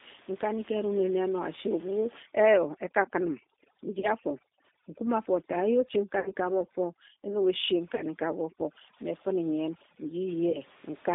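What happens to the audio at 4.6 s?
At 4.6 s the sound falls inside a stretch of overdone noise removal that runs from 2.23 s to 10.29 s. A noise reducer set far too hard shuts off individual frequency bands whenever their level sits near its noise estimate, so the room noise, about 22 dB below the speech, collapses into near silence scattered with twinkling specks, and the quieter parts of the voice are carved away with it. Unlike a gate, which mutes everything at once, this pulls out separate bands, which causes the flickering, tonal specks.

Underneath, across the whole clip, the G.729 codec is plainly audible. The speech has been rebuilt from a vocal tract model, a pitch predictor and a few pulses per frame, which fits an 8 kbit/s codec. That gives it a rough, slightly synthetic edge, and the band stops near 200 Hz and 3.7 kHz. Unlike simple band-limiting, the roughness is in the texture of the voice itself, not just missing highs and lows.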